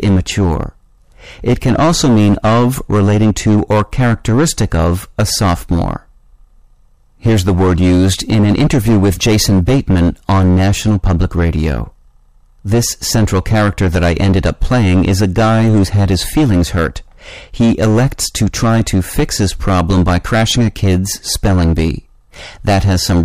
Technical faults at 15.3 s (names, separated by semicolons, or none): hard clipping